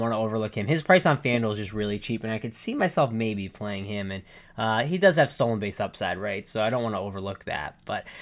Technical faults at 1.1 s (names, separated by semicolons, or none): none